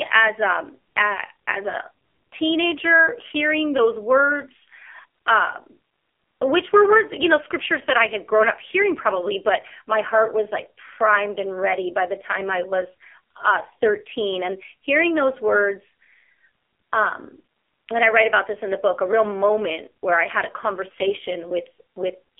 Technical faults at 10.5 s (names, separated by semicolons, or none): AMR narrowband mobile codec